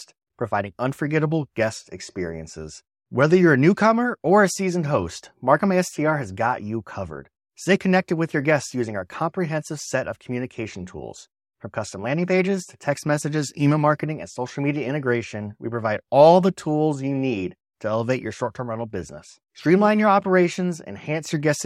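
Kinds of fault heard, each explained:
No kinds of fault are heard in this speech clip.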